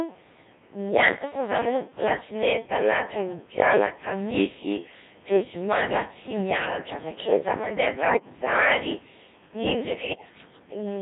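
Block size mismatch (padded) runs through the whole clip. One stage hands over shorter blocks than the next stage expects, so each block is topped up with a stretch of silence. That regular gap puts a steady buzz at 100 Hz under the speech and stretches the timing, so the talk runs at about 0.92 of normal speed, roughly 8% slow. The timbre stays about where it should be, because the samples are not resampled.

The Codec 2 vocoder is also present from start to finish, with heavy damage that fits its 1.3 kbit/s mode. The speech is not carried as a waveform at all. Only pitch, voicing, level and a rough spectral envelope are sent, and the decoder rebuilds the voice from sine waves. The result is robotic and buzzy, with a smeared, synthetic tone. The room noise, about 33 dB below the speech, gets mangled along with it.

Bit errors on digital voice radio strike from 8.01 to 8.30 s. Flipped bits land in the vocoder's very compact frames, where each bit steers the pitch, level, voicing or spectrum of a whole frame. 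The synthetic voice lurches in pitch and loudness and breaks into warbles and bleeps. The span fits about six corrupted frames at a bit error rate of several percent.

A second burst of bit errors on digital voice radio follows from 10.00 to 10.38 s. It is longer, fitting about eight corrupted frames, at a somewhat lower error rate of around five percent. The sound is the same. Pitch, level and tone colour jump frame by frame, and the voice dissolves into robotic gibberish until the errors stop.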